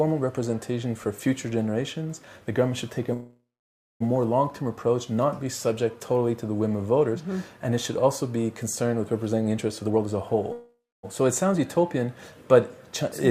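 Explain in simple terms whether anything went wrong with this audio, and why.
Call audio freeze, at 3.13 to 4.02 s and again at 10.52 to 11.05 s. The last bit of sound stretches into a fading buzz, then goes quiet, for about 0.59 s the first time and 0.27 s the second. This is likely because delayed data made the receiver run out of audio to play. When playback resumes, it picks up where it stopped, so nothing is lost, but everything afterwards arrives later.

Jitter buffer speed-up, from 9.83 to 10.50 s. Here the sound plays at about 130% speed without changing pitch, so it sounds rushed. The receiver had built up too much waiting audio and trimmed many tiny slices, roughly 0.2 s in total, to catch up.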